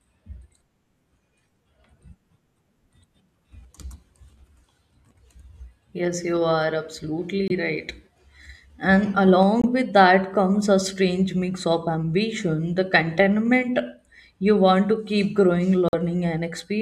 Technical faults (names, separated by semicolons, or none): Bluetooth dropout